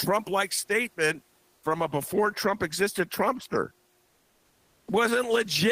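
Between "like statement" and "from a before" (1.55 to 1.63 s), and again from 4.07 to 4.87 s, the room's background turns flat, featureless and about 3 dB quieter. This is comfort noise in place of the background, likely from discontinuous transmission substituting synthetic noise during pauses.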